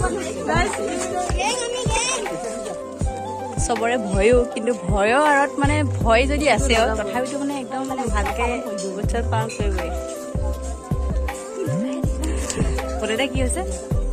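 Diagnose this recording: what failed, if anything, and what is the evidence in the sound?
Repeated frames at 1.95 to 1.98 s and 8.27 to 8.30 s: a codec or storage fault replays one 26.1 ms block, which fits a single compressed frame, causing a brief stutter.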